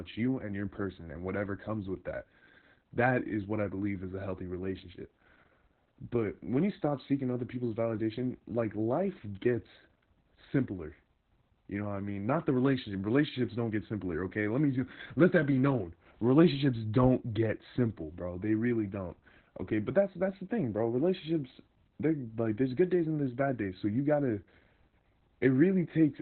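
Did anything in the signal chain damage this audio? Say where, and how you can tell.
Yes, at the codec. Throughout, the speech is muffled, hoarse and robotic, cut off above 4 kHz. That fits Opus voice compression in SILK narrowband mode, near 8 kbps.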